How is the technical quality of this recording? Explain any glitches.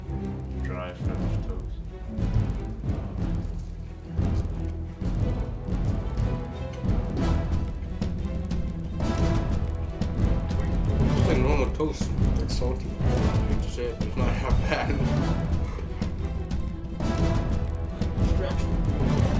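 The quality takes a hit from one steady fault running through the whole recording: a resampler restarted on every block. The audio seems to be converted from 44.1 kHz to 16 kHz in 50 ms chunks, and each chunk's edges miss their real neighbouring samples. That leaves a small error every 50 ms, so there's a 20 Hz ticking buzz riding along whenever there's signal.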